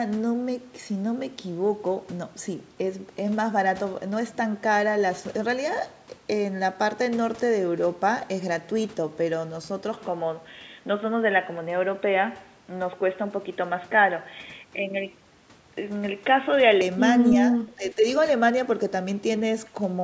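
Speech that turns dull and boxy at 9.97 s, with no gap at the change, and stays that way until 16.81 s. The band narrows in that stretch, so it loses the air that the rest of the clip keeps up to 8 kHz under normal call microphone processing. The level also shifts by about 5 dB, and a faint new noise floor sits well below the speech. The likely cause is an input switched to a poorer device, such as a second microphone or a headset in its narrowband call profile. Shortly afterwards, between 17.51 s and 18.04 s, the voice drops deeply, by up to about 15 dB, affecting about a third of a second in total. That pattern points to speech suppressed in double talk. The echo canceller likely heard both sides at once, could not separate the talker from the loudspeaker echo, and turned the talker down along with it.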